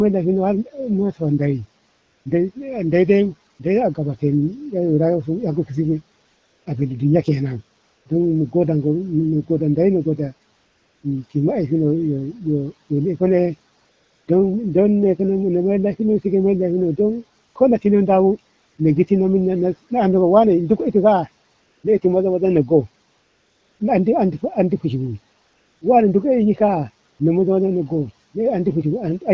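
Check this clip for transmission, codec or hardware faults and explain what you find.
One transmission fault recurs throughout the speech. AMR comfort noise occurs in twelve pauses between 1.89 s and 27.19 s, lasting from 20 ms to 680 ms each. The phone judged these pauses silent and stopped sending speech frames, so the receiver filled them with synthetic noise. The real background drops out and is replaced by a steady, smooth hiss that switches in and out.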